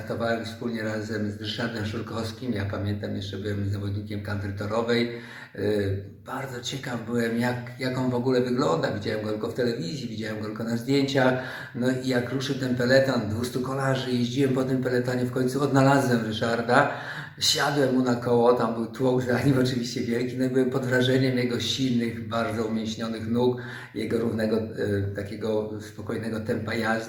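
No technical faults can be heard anywhere here.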